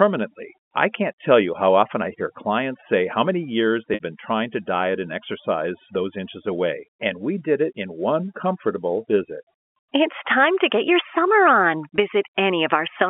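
Speech over a G.711 telephone line, which itself passes its 200 Hz to 3.4 kHz band cleanly, suffers from overdone noise removal throughout. Background gaps sink to near silence sprinkled with twinkling specks. Unlike codec swirl, the damage follows the noise floor, eating quiet parts of the speech rather than the loud ones. Packet loss with pitch repetition occurs twice. From 3.94 to 4.00 s, about 60 ms is bridged by repeating the last pitch period, which fits three 20 ms packets; the repetition fades out into brief silence before the speech cross-fades back in. A shorter 20 ms gap follows at 11.96 to 11.98 s. It sounds like a briefly held, buzzy tone rather than the hard silence or click of a plain dropout.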